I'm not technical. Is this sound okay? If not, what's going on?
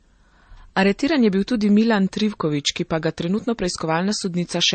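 No. Throughout, the speech sounds dull above 8.4 kHz and smeared, with mixed swirly and gritty traces, likely transcoding between lossy codecs: repeated compression, not one squeeze.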